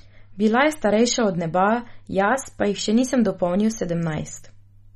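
A speech recording with plainly audible MP3 compression the whole way through: nothing survives above 13 kHz, and the watery, swirly texture suggests weak frequency lines dropping in and out between frames, likely from encoding at a low bitrate, around 32 kbps.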